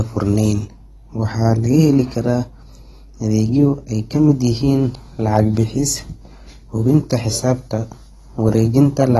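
A ground loop or a nearby power transformer is leaking the 50 Hz mains supply into the signal from the very start, and the resulting mains hum runs under the speech for the whole clip. It sits as a steady, low drone at 50 Hz with a few low harmonics above it. At roughly 25 dB below the speech it fills every pause and gives the recording a constant electrical grumble.

Alongside it, and also present throughout, the audio has likely passed through AAC compression at a low bitrate, which fits something around 32 kbps. At that rate the encoder throws away detail its hearing model judges least important, and here nothing survives above about 12.1 kHz. The speech therefore sounds dull and smeared, with the lost top end muffling consonants, and the codec damage is plainly audible as a warbling, fizzy texture on sibilants and held vowels.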